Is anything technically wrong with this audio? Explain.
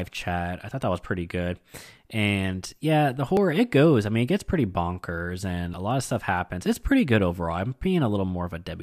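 Yes. At 3.37 s, between "yeah the" and "it goes I mean", and again at 5.74 s, between "gets pretty bonkers and" and "a lot of stuff", the speech jumps abruptly with no gap of silence. Roughly 20 ms of sound is missing each time, and the two sides butt together. The likely cause is a dropped buffer (overrun): the capture software failed to collect a block of samples before the hardware overwrote it.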